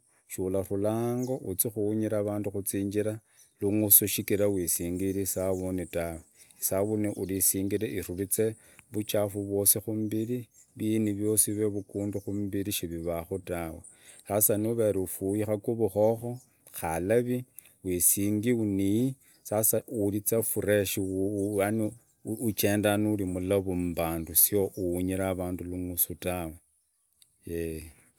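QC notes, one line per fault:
No technical faults were found in this speech recording.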